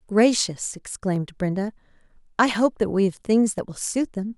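Speech with three sharp clicks at 1.16, 2.55 and 3.58 s, each a thin vertical spectrogram line and waveform jump, likely dropped samples losing well under a millisecond.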